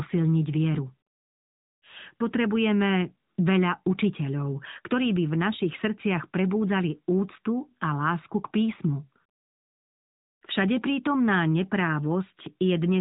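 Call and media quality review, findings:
AMR narrowband mobile codec on the path, whole clip. Narrowband 8 kHz transcoding strips everything above 3.8 kHz, so sibilants and consonant edges go dull and boxy. Plainly audible codec damage: a vocal-tract model driven by sparse pulses per 5 ms subframe makes the speech buzzy and synthetic, consistent with a mid-range AMR-NB mode near 10.2 kbps. Likely component is a mobile leg or gateway transcoding to AMR-NB.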